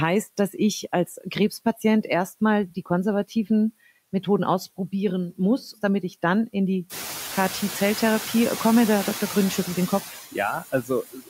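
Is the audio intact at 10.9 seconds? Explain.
No. At 10.9 seconds the audio is hit by speech cut by the noise suppressor. This runs from 10.61 s to the end of the clip at 11.30 s. The suppressor mistakes parts of the speech for background noise and turns them down with it. Roughly a third of a second of speech is affected in total. At its deepest the level drops by about 18 dB. Soft consonants and word endings sound swallowed or faint.

Noise suppressor artifacts are also present at this moment, as they are throughout. The suppressor judges each frequency band frame by frame and lowers what it takes for steady noise, here by about 13 dB. The residual background rises under the speech and sinks between words. The room noise rises around 7 s and sits about 12 dB below the speech.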